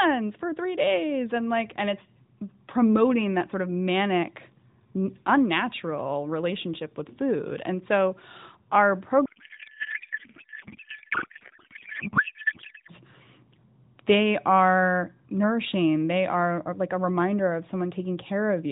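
Speech carried over AMR narrowband, band-limited below 4 kHz, suffers a codec payload misread from 9.26 to 12.92 s. The audio turns into garbled noise and warble that barely tracks the speech. This sustained scrambling, rather than the brief gaps or repeats of packet loss, points to octet-aligned AMR frames being unpacked as bandwidth-efficient, with every field landing in the wrong place.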